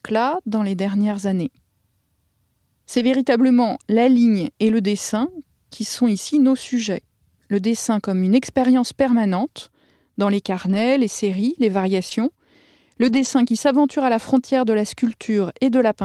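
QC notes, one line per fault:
1.11–1.13 s (after "dans les"), 2.95–3.05, 4.67–4.69, 10.65–10.79, 12.11–12.13 (after "les séries les") and 13.01–13.27 s (before "qui s'aventure à la"): lost packet rebuilt from error correction. There are no gaps, but these stretches sound rougher and noisier because low-bitrate redundant copies were decoded. The rebuilt audio lasts 20 to 140 ms per event.
12.09–12.13 s: short concealed packet loss. About 20 ms was missing. The decoder extrapolated the preceding sound, which leaves a brief smear or wobble as it blends back into the error-correction frame.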